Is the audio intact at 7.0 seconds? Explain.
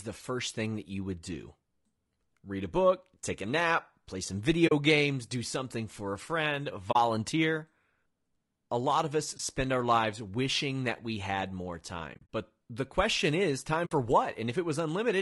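No. Just after "something for a friend", an AAC frame loss with muting leaves a hole from 6.91 to 6.96 s, about 40 ms, roughly two frames. The decoder zeroed the lost spectrum, so the overlapping windows fade the sound out and back in. Unlike a hard dropout, the gap has soft edges.

The speech at 7.0 s also sounds rough and grainy throughout, with noise filling the spaces between the harmonics and a thinned, synthetic-sounding top band. This is likely low-delay AAC (AAC-ELD) compression at a low bitrate, around 32 kbps.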